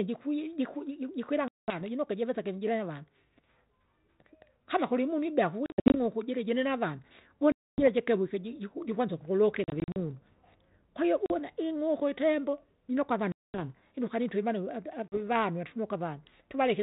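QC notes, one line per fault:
1.48–1.81 s, 5.66–5.97 s, 7.52–7.88 s, 9.64–9.97 s, 11.26–11.32 s, 13.32–13.61 s, 15.08–15.16 s, packet loss on an ADPCM call: hard-edged silent holes of 40 to 260 ms. At 5.66 s and 9.64 s these are broken into short gaps of up to 60 ms. After each hole the sound returns slightly distorted before it settles. This happens because the 32 kbit/s G.726 decoder's adaptive predictor and step size lost track of the sender's across the missing packets.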